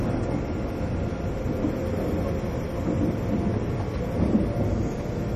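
From start to finish the audio carries plainly audible MP3 compression artefacts: nothing survives above 14.3 kHz, weak components flicker in and out to give a watery, swirling texture, and transients smear. This likely comes from encoding at a low bitrate, which fits around 40 kbps.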